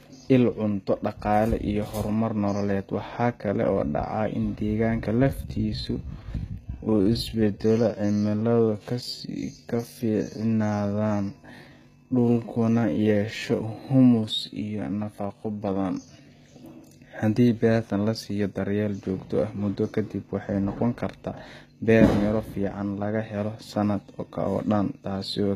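Speech recording carrying HE-AAC compression throughout, likely from a low-rate encoder that fits about 20 kbps: treble above the coded band is rebuilt from copied lower bands, so sibilants turn gritty and metallic. A time-stretched section runs from 5.11 to 16.25 s, likely software slowing it to 0.728 times speed by repeating short pieces, so the pace drops abruptly while pitch holds, and the speech drags.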